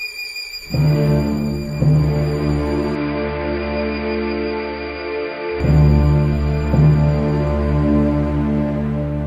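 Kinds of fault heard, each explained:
Input switched to a poorer device: from 2.95 to 5.60 s the sound turns dull and a little quieter, with nothing above 5.1 kHz and faint new background noise, likely a change of input device.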